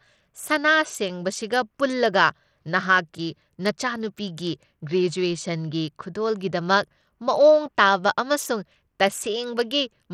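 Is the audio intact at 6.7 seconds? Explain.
No, at 6.7 seconds the speech carries the same damage as the rest of the clip: dull, flickering treble with gritty noise, likely Bluetooth SBC compression at a starved bitrate around 80 kbps.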